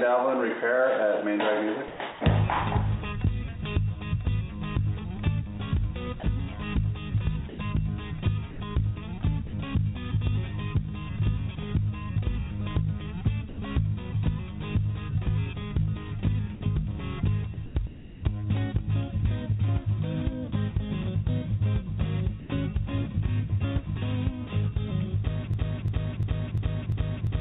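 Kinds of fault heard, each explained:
Sound chopped by the voice detector: Three stretches flicker between real audio and a synthetic hiss, around 1.88 to 2.21 s, 6.2 to 9.53 s and 16.55 to 18.23 s, with about 0.21 s, 0.27 s and 0.54 s swapped out respectively. Most likely the sender's voice detector kept toggling transmission off on quieter bits, so the receiver filled the gaps with comfort noise. It comes across choppy.
Sound dropped by the voice detector: At 13.49 s and again at 22.4 s, a 90 ms slice of sound simply vanishes and gets replaced by steady comfort noise before the audio picks back up. The likely cause is the detector mistaking a soft moment for background and briefly stopping sending. Because both gaps are short and the fill is noise rather than silence, they read as tiny holes against the band-limited, roughly 4 kHz-topped call sound.
Broken-record loop: From about 25.54 s to the very end, a piece of roughly 0.35 s repeats back to back, five times, identical each pass. 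That pattern points to something in the chain, likely the player or stream, stalling and resending the last fragment it had buffered. Whatever should have played in those final couple of seconds is gone, replaced by the stutter.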